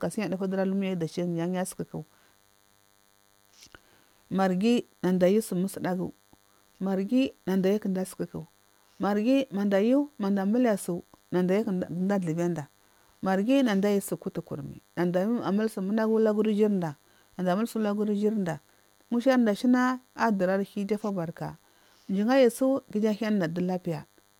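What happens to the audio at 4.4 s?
At 4.4 s the speech carries a DECT cordless phone buzz, present throughout the clip: a nearby phone's radio bursts every 10 ms are rectified into a faint, thin 100 Hz buzz well below the speech, rich in harmonics rather than the smooth tone of mains hum.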